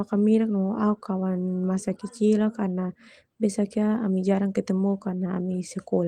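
Speech recording, no technical faults detected.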